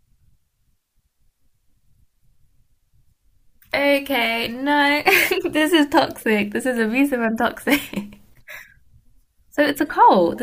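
Nothing stood out on listening to this speech recording; no technical problem could be heard at any point.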